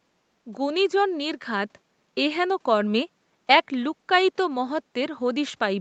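No faults found: room noise sits about 43 dB below the speech, and the call processing and codec leave the band topping out at 8 kHz, as expected for this path.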